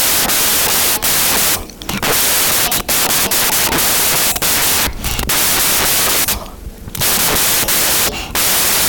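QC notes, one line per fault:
Throughout: wrong sample width. 16-bit audio read as packed 24-bit, so loud noise buries the speech, which runs 1.5 times fast and pitched up.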